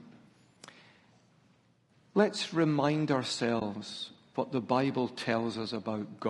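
Throughout the speech, the encoder likely ran a low-delay AAC compression mode, AAC-ELD, whose short frames resolve pitch harmonics poorly. At a rate consistent with about 32 kbps, the voice sounds plainly rough and grainy, with noise filling between harmonics and a thinned, somewhat synthetic top band.

From 3.59 to 3.62 s, an AAC frame loss with muting occurs. The decoder zeroed the missing spectrum, which fits a single lost frame of about 20 ms. The overlapping windows fade the sound out and back in, leaving a brief dip.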